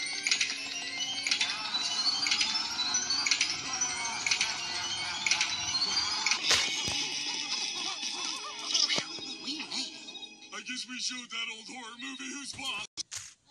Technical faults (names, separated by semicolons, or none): MP2 compression